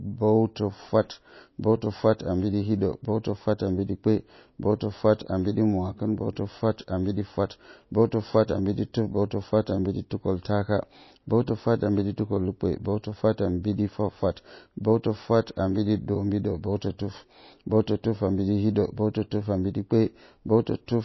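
Throughout the speech, a starved encoder, likely MP3 compression, removes everything above 5.8 kHz and drops weak frequency lines from frame to frame. This points to a bitrate around 24 kbps. The result is dull, watery, swirling audio with metallic chirps on s sounds and smeared attacks.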